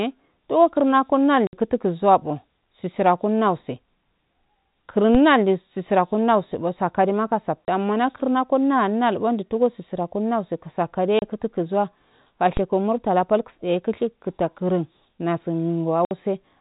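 A speech recording carrying two kinds of fault. Packet loss filled with silence cuts four hard-edged holes: 1.47 to 1.53 s (60 ms, between "to kurna" and "kutuzuwa sisira kannantse"), 7.65 to 7.68 s (30 ms), 11.19 to 11.22 s (30 ms, just before "kutu kuzawa") and 16.05 to 16.11 s (60 ms). The gaps come in 30 ms units, which points to 30 ms packets dropped singly or in pairs. The receiver inserted digital silence instead of concealing the loss, so each cut and resumption is abrupt. A DC step, a sudden shift in the waveform's zero line, occurs at 5.15 s, immediately before "sisira kunnanse sakane ma", and again at 12.57 s. Each is heard as a short low thump while the speech continues unchanged. The offset then decays away as a 20 Hz high-pass would drain it rather than holding. The band-limited, telephone-style character is consistent with G.711 mu-law coding at 64 kbps, which adds only faint damage of its own.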